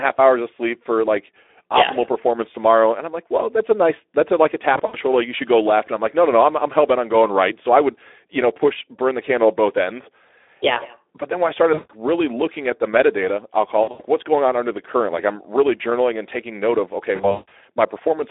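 Throughout, the speech carries Speex codec damage: a hoarse, noisy grain, consistent with a low setting of about 11 kbps. The line is band-limited to 300 Hz to 3.6 kHz, so a spectrogram shows blurred harmonics and nothing above that ceiling.

VoIP packet loss concealed by the speech codec occurs at 4.73 to 4.96 s, 11.73 to 11.91 s, 13.83 to 14.02 s and 17.15 to 17.52 s, covering 120, 160, 120 and 240 ms. The decoder stretches the last sound into a fading buzz or coloured noise, visible as smeared, repeating harmonic bands and a sagging waveform envelope.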